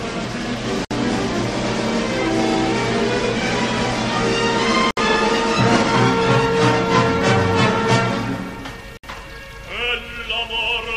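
Brief silences of about 60 ms, with smeared edges, interrupt the sound every 4 s, at 0.85, 4.91 and 8.97 s. These are gaps at a join of encoded pieces, where untrimmed encoder delay and padding remain.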